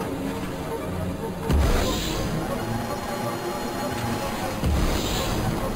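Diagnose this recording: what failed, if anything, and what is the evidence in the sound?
The fault is imaging from sample-and-hold upsampling at the sample-rate conversion stage, heard throughout. A metallic fizz sits between about 5.5 and 11 kHz at roughly 17 dB below the signal, and its level follows the sound. That band mirrors the content below 5.5 kHz, folded about 5.5 kHz, which points to a source near 11 kHz raised to 48 kHz by repeating samples with no smoothing filter. Steady hiss would not track the level, and the mirrored copy moves against the pitch.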